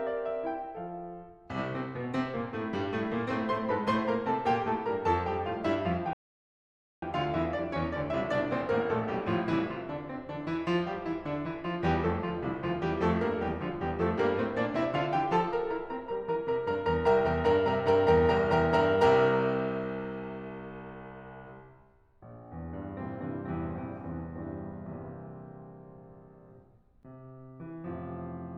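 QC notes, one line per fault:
6.13 to 7.02 s, rebuffering stall: the music drops to dead silence for about 0.89 s, then picks up at exactly the point it left off. The player ran dry of downloaded audio and waited for more, so nothing's missing, it just runs late.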